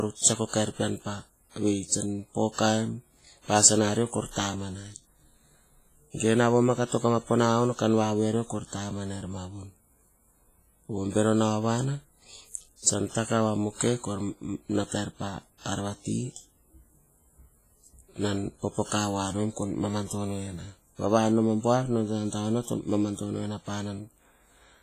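Across the whole speech clip there is heavy transform-codec damage, most likely WMA compression at a low bitrate, around 24 kbps. Long coding blocks smear quantisation noise into a ringing, washy hiss that swells and fades with the signal, and nothing remains above 15.3 kHz.

At 0.47 s, pre-echo appears: a short hiss rises about 59 ms ahead of a sharp onset, ending at 0.53 s. The codec spread noise scaled for the loud attack across the quiet start of its block, so the attack sounds softened and smeared.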